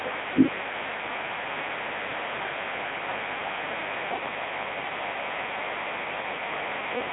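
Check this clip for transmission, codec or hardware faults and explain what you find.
There's one fault, and it runs the whole length of the speech: a Codec 2 vocoder. The decoder throws the waveform away and rebuilds the voice from sine waves driven by pitch, voicing, energy and a spectral envelope, so everything comes out robotic and buzzy, with heavy damage throughout. The sound sits in a 300 Hz to 3.7 kHz band with nothing above 3.8 kHz, which fits Codec 2's 3.2 kbit/s mode.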